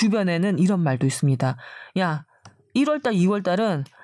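No technical faults can be heard anywhere in the speech recording, and the signal stays steady and continuous throughout.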